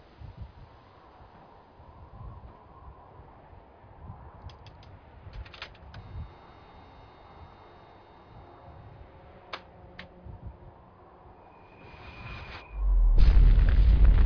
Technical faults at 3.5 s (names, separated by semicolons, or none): none